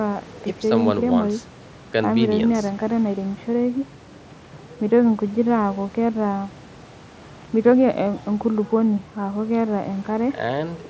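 No technical faults are audible.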